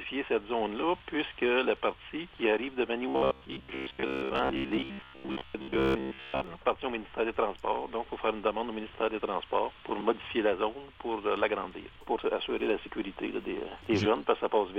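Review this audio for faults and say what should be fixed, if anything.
Robotic sound from repeated short buffers runs from 3.09 to 6.44 s: a rigid metallic buzz near 66.7 Hz, likely from a 15 ms chunk being replayed for most of that stretch while new audio is skipped. Unlike dropouts, there are no silent gaps, only a fixed buzz pitch. Larger buffering or a steadier audio feed would prevent it.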